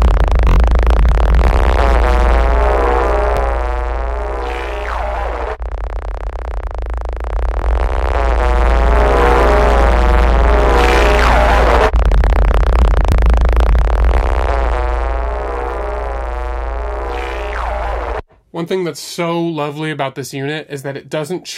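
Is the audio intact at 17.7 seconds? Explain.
Yes, the audio is intact at 17.7 seconds, with no dropout, click, distortion or other technical fault at that moment.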